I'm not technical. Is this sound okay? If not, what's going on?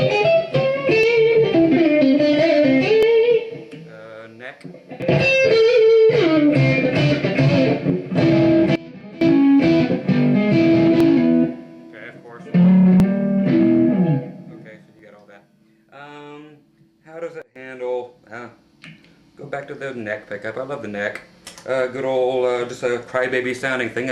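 No. There are two kinds of fault.

The first is an overlap between stream segments. The audio arrives in two-second pieces, and at each join a sliver of sound is cut out, so the sound jumps forward as a tiny skip. This happens at about 1.03, 3.03, 5.02, 7.02, 9.01, 11.0, 13.0 and 14.99 seconds. Each skip is very short. Unlike a dropout, nothing goes quiet; a piece simply goes missing.

The second is a sudden gain jump. From 8.76 to 9.21 seconds and from 17.42 to 17.56 seconds, everything suddenly becomes much quieter, background included, then comes back. This is likely a volume setting switched abruptly instead of being faded. Unlike the skips, no sound is lost; only the loudness changes.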